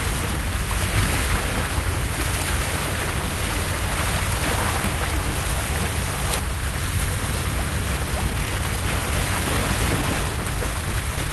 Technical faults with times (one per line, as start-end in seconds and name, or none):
8.11-9.58 jitter buffer speed-up
10.01-11.30 jitter buffer speed-up